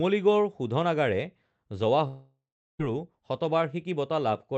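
From 2.07 s to 2.81 s the speech cuts out for about 0.72 s, likely a long network dropout. With no audio arriving, the receiver stretches the last sound into a fading buzz, leaves roughly 0.38 s of near-silence, then resumes further on without the lost stretch. A spectrogram shows the harmonics smearing into a decaying smudge and then a blank band, and the waveform collapses to a flat line. Throughout, the call codec leaves the spectrogram empty above 8 kHz.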